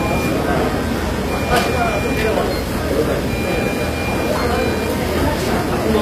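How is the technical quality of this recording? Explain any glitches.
The recording has plainly audible compression damage running through all of it. The likely cause is HE-AAC compression at a low rate, and the sound fits a bitrate of around 24 kbps. At that rate the encoder codes only the lower spectrum and synthesises the treble by copying lower bands upward under a coarse envelope. The top end stays bright but is rebuilt rather than real, so high detail sounds gritty and metallic, and nothing is present above 14.9 kHz.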